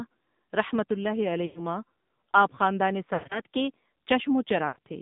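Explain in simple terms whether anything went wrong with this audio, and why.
AMR narrowband mobile codec, throughout the whole clip: the speech was squeezed through an old-style mobile phone codec that rebuilds the voice from a simple model of the throat. Everything above about 3.7 kHz is gone, so the voice sounds muffled, buzzy and plainly artificial.

Lost AMR speech frames at 1.46 to 1.62 s, 3.14 to 3.40 s and 4.68 to 4.77 s: bits of the signal were damaged by radio errors and thrown away, so the decoder kept stretching the last good sound while fading it out. Each gap is heard as a smeared, warbling dip, and the voice returns briefly weak or rough.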